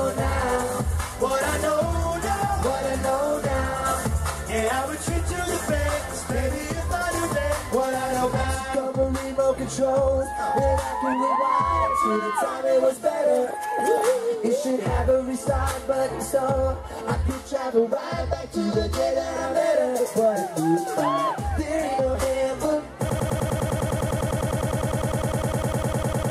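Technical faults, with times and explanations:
23.10 to 26.31 s, broken-record loop: a fragment of about 0.10 s repeats exactly, back to back, 32 times until the clip ends, giving a rapid stutter at roughly ten repeats per second. The player or stream likely stalled and kept re-sending its last buffered piece, so the audio due in those final seconds is lost. Unlike an echo or reverb tail, each repeat is identical and undecayed, and nothing new follows.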